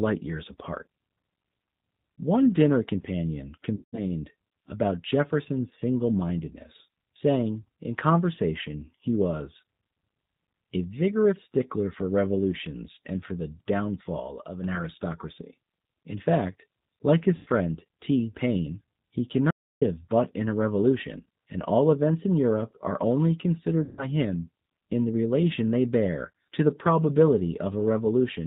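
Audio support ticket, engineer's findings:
G.729 codec, whole clip. Band-limited, nothing above 4 kHz, with a plainly audible rough, synthetic texture from 8 kbit/s parametric coding (G.729A). Differs from a plain low-pass filter: the grain itself is synthetic, not just dull.

VoIP packet loss concealed by the speech codec, 3.76–4.01 s (about 170 ms lost), 17.36–17.48 s (100 ms), 23.84–24.08 s (140 ms). Decoder extrapolates last pitch and filter into a buzzy tone or coloured noise that fades. Weak or distorted onset after each gap. Not silence, so not a dropout.

Sudden gain jump, 14.2 s to 14.64 s. Level and background noise drop together by about 5 dB, then return. Likely an unramped digital gain change. Signal continues throughout, so this is a level step, not a gap.

Audio dropout to silence, 19.51–19.81 s, about 305 ms. Hard cut to silence with no room tone, then sound resumes mid-flow. 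Likely input loss with silence written. No buzzy concealment tail, which separates it from packet loss.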